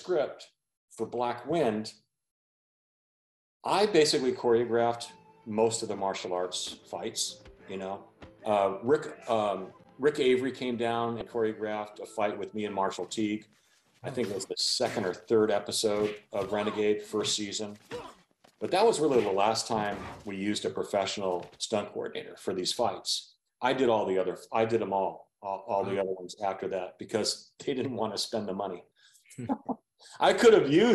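At 11.18 to 11.22 s there's a quick glitch from damaged data in the compressed stream. For about 34 ms the decoder hit corrupted bytes, couldn't read those frames properly and had to hunt for the next valid frame header, so you get a brief blip before things lock back in.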